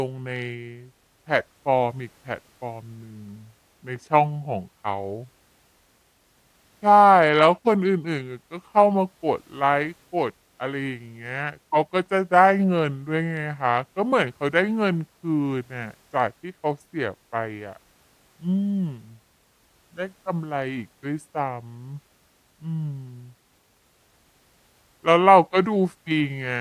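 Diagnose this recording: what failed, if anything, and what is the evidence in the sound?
Wrong sample rate at playback: the speech runs at 0.726 times speed and 5.55 semitones low throughout. This fits 44.1 kHz audio played at 32 kHz without conversion.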